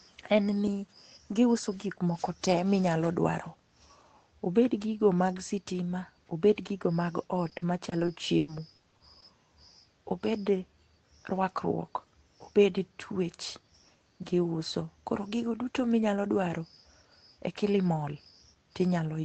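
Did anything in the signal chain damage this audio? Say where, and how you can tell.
Yes. Repeated packet loss (robotic sound) from 7.49 to 9.24 s, a network-stage fault. Across that stretch there are ten gaps, the longest 100 ms, adding up to about 320 ms of missing audio, and the concealment fills roughly a fifth of the span. Each dropout is patched by stretching the preceding sound, so the fills come too close together to hide, giving a choppy texture with pieces missing, within the call path's 8 kHz band limit.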